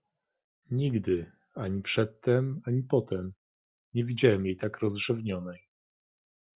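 Nothing goes wrong anywhere in this speech recording, so there's nothing to point to along the way.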